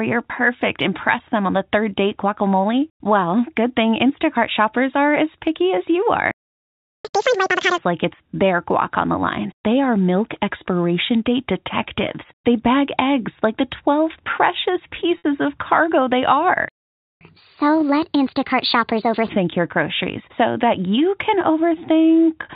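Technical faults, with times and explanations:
6.31–7.05 s and 16.69–17.21 s, playback stall: the sound just cuts out mid-flow, first right after "as picky as you" for about 0.73 s, then after "of cargo they" for about 0.52 s. That points to the player's buffer running dry or its output thread getting blocked.
7.05–7.78 s and 17.21–19.29 s, catch-up at higher speed: right after each stall the player races through its backlog by resampling, so speed and pitch go up together and then drop back. After the first stall it runs at 2x for about 0.73 s, with the pitch jumping close to an octave and sounding chipmunk-like. After the second it runs at 1.25x for about 2 s, roughly four semitones sharp, until "your groceries so that" settles back to normal.
15.18 s, packet loss with pitch repetition: about 60 ms goes missing, which fits three 20 ms packets. The receiver covers the hole by looping the last pitch period and fading it down, so you hear a brief buzzy, held tone in place of the real sound before things cross-fade back. 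The rest of the chain is a G.711 mu-law telephone link, so everything is band-limited to 4 kHz.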